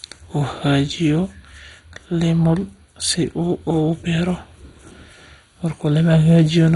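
MP2 compression, running through the whole speech clip, likely accounts for the dull, gurgling sound: nothing survives above 11.2 kHz, and the heavy, granular damage in the remaining sub-bands, which flicker on and off from too few bits, points to a rate near 56 kbps.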